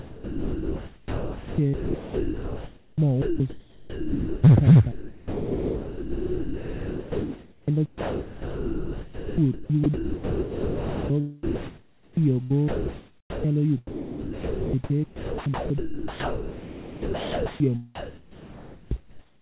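Speech that keeps breaking up, its quieter parts and word edges giving way to a flat hiss. That is sound chopped by the voice detector, and it runs through four stretches: 0.00 to 4.44 s, 4.92 to 11.10 s, 11.43 to 13.44 s and 13.87 to 17.60 s. The fill adds up to about 3.9 s, 5.6 s, 1.6 s and 3.3 s respectively. The likely cause is a sender-side voice detector repeatedly switching transmission off and on, each gap covered with synthetic noise of the standard comfort-noise kind. From 17.95 to 18.91 s the speech itself gives way, a case of sound dropped by the voice detector. Roughly 0.6 s of real sound is missing inside that 0.96 s of steady fill, as though the detector mistook quiet speech for background and stopped sending until it triggered again. Over the closing 17.95 to 19.41 s, comfort noise in place of the background replaces the room's natural texture with a smooth, featureless noise for about 1.4 s, likely the pattern of discontinuous transmission where the receiver generates noise shaped only roughly like the original. 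Underneath all of this, the audio is band-limited with nothing above 4 kHz, which fits a 64 kbps G.711 mu-law call path.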